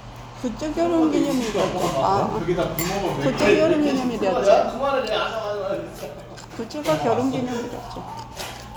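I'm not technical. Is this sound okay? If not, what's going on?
Yes, nothing in this recording of sounds needs fixing.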